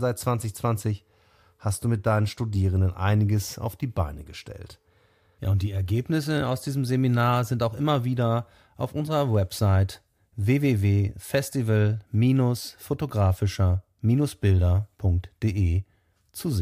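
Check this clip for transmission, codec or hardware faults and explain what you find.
Nothing in the speech points to a transmission, codec or hardware problem.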